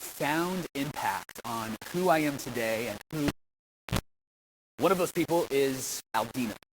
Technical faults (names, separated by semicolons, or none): low bit depth without dither; cable pulled and plugged in